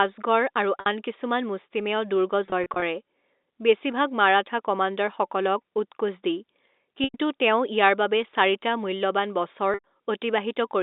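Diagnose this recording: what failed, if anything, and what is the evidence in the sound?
The network dropped packets, and you can hear packet loss with pitch repetition at 0.80 s, just before "আন কিছুমান", in scattered brief drops from 2.46 to 2.82 s, and at 7.04 and 9.74 s. The receiver loops the last pitch period, so short gaps become a held, buzzy patch over the narrow telephone band, while longer ones fade into silence before the speech cross-fades back in.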